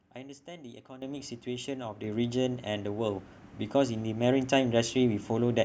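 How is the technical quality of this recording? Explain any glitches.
The recording has two abrupt level jumps, both from the microphone volume being stepped up. At 1.02 s the input volume rises by about 10 dB and at 2.04 s by about 6 dB. The device gain was raised in a single step each time, so voice and background noise jump together instantly. A speaker leaning closer would make only the voice louder, and a smooth gain ramp would not step like this.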